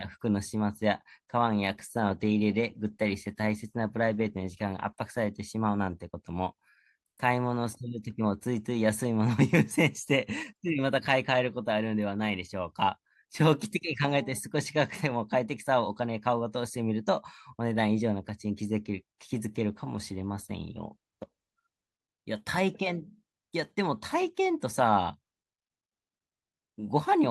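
It's a speech recording hit by two call bitrate drops, at 1.47 to 5.38 s and again at 19.71 to 22.06 s. Each time the sound turns coarse and watery and loses its top end, then clears up when the rate recovers. That fits the bandwidth estimate collapsing and the encoder being squeezed from around 64 kbps down to roughly 24 to 25 kbps, coding everything more crudely and trimming the highs until the bits came back.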